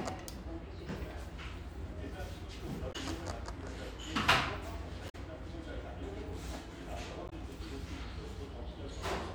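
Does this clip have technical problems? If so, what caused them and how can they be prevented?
Yes. The clip has damaged data in a compressed stream. At three points, parts of the encoded data reached the decoder corrupted. The decoder could not read those frames correctly, lost its place and had to find the next valid frame header. Each break is heard as a short chirp or blip, at 2.89 to 2.96 s, 5.08 to 5.15 s and 7.28 to 7.33 s. Each lasts 50 to 70 ms. To prevent this, store and transfer the file with checksums or error-checked protocols, and keep metadata such as stream titles out of the audio frames.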